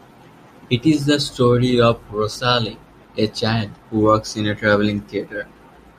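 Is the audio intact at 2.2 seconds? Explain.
Yes, at 2.2 seconds the speech plays through intact, with no dropout, click or other fault at that moment.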